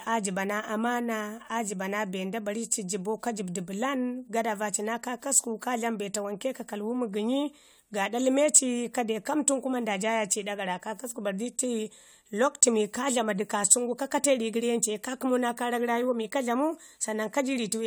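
No technical faults are audible anywhere in the recording.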